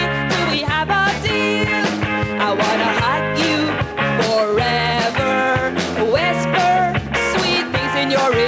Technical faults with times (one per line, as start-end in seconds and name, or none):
none